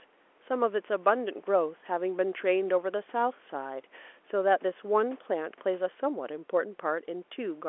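No technical faults are audible.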